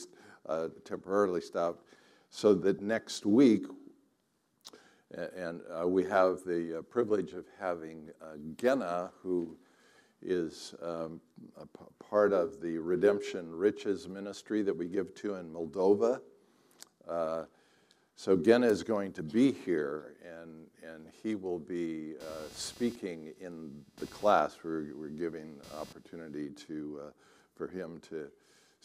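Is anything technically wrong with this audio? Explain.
Yes, there are two faults.

At 2.79 s there is a corrupt frame decoded: damaged bits in a couple of compressed frames were decoded anyway, so misread gains put energy at the wrong frequencies. It comes through as a brief, faint blip, peaking around -40 dBFS.

From 22.20 to 26.38 s there is computer activity noise: changing load on the host computer disturbs the audio circuit's shared ground. The result is a buzzy pulsing at roughly 300 Hz, sitting about 25 dB below the programme sound, which starts and stops independently of the audio itself.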